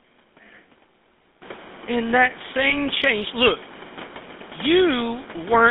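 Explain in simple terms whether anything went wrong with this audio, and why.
Two things went wrong. For the whole clip, the speech passed through the GSM full-rate codec, the compression used by early mobile phones. It rebuilds the voice from a rough model driven by evenly spaced pulses, which gives this speech a buzzy, gravelly texture. Everything above about 3.6 kHz and below about 200 Hz is gone. General muffling would only dull the sound, but this codec damage adds a grainy roughness on top of the narrow phone-line band.

From 2.7 to 2.75 s, just before "change look", a lost GSM frame was patched by reusing the settings of the last good frame. Here that repair covered one 20 ms frame, and it shows up as a brief, harsh, metallic ring rather than a clean gap. A simple dropout would leave silence or a click, but this gap is filled with a held, buzzing smear.

The background room noise that grows louder from around 1.5 s comes from the room where the recording was made, not from the phone system.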